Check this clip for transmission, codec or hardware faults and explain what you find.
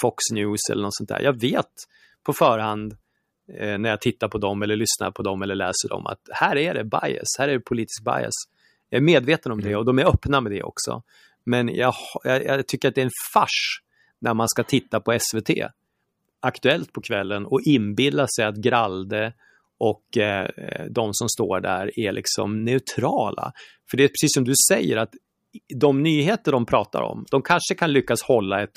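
Nothing stood out on listening, so there's no fault to report in this speech recording.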